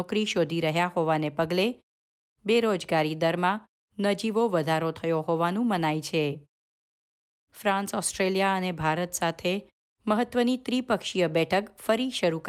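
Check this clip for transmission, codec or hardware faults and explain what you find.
No faults found in this clip.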